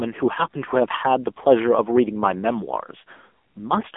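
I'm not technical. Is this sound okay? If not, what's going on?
No. Throughout the whole clip you're hearing the AMR narrowband mobile codec, the compression used for ordinary 2G and 3G phone calls. It rebuilds speech from a simple model of the mouth and throat, using very little data, so the speech comes out buzzy and artificial, heavily so here. Nothing above about 3.6 kHz survives, and the deepest sounds below 250 Hz are gone too, which gives that thin, muffled phone-line sound.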